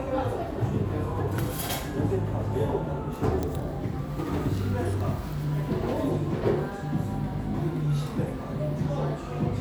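At 1.38 s a sharp snap cuts in on top of the sound. It is an electrical switching spike. The event is very brief, under a hundredth of a second, and peaks at around -20 dBFS. The likely cause is a nearby switch, motor or static discharge throwing a short arc. The audio line picked up that arc as a burst of interference. It sounds like a dry, tight crack layered over whatever is playing.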